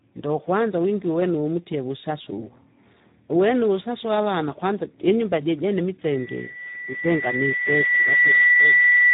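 From the start, the speech carries heavy Speex codec damage. It sounds hoarse and grainy. Too few bits reach the excitation signal, so the voiced sound loses its natural buzz and turns noisy. The damage is severe enough to fit a low setting near 8 kbps. Nothing is heard above 3.8 kHz. The top of the band is simply gone, which makes the sound muffled and narrow.

At 6.10 s, right after "aavana kwanza jinyumba jijene", a loudspeaker feedback squeal begins. The microphone is picking up its own loudspeaker, and at 2 kHz the loop gain passes one. That tone feeds itself and grows. It swells over about two seconds into a piercing whistle. It ends up around 10 dB louder than the speech. It holds until the clip ends.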